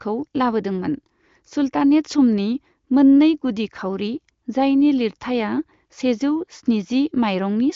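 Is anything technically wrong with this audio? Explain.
No, nothing is technically wrong: the speech comes through the AMR wideband (HD Voice) codec at 23.05 kbit/s, a rate where that codec keeps speech clear, and its expected bandwidth limit leaves nothing above about 7.4 kHz.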